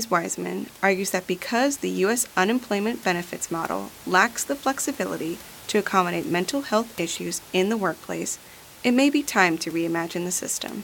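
Nothing technical goes wrong in this bit of speech; there's no dropout, glitch or distortion anywhere in it.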